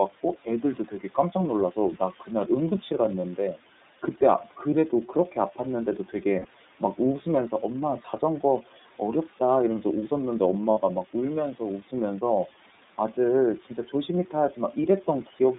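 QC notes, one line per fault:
Throughout, iLBC codec: the sound sits in a narrow 200 Hz to 3.7 kHz band, so it's boxy and thin, and each frame's excitation is coded on its own, giving a plainly rough, slightly synthetic edge. The 30 ms packet gaps below suggest the 30 ms frame mode.
0.23 to 1.35 s, 8.01 to 8.22 s, 11.83 to 11.93 s, 13.62 to 14.09 s, speech cut by the noise suppressor: the suppressor mistook bits of speech for the room noise, which sits about 21 dB under the speech, and pulled them down about 9 to 11 dB. Short stretches within these spans sound swallowed or faint.
3.21 s, 6.39 to 6.46 s, 10.71 to 10.78 s, lost iLBC frames: dropouts of 30, 60 and 60 ms where the decoder repeated the last pitch cycle with some noise mixed in, so you hear a brief held, buzzy vowel. The speech snaps back straight after each gap.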